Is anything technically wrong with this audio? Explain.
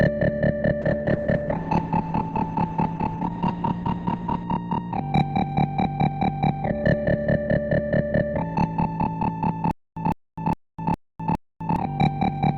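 Yes, there are two faults. From 0.83 to 4.51 s, a call bitrate drop: the encoder was starved of bits, which fits a fall from about 128 to 10 kbps. The audio turns coarse and muffled, with the top end cut from 20 kHz to 8 kHz.

From 9.71 to 11.76 s, a stutter with silent gaps, likely from a stalling stream replaying its last fragment. A 156 ms burst repeats five times every 410 ms, separated by 254 ms of silence.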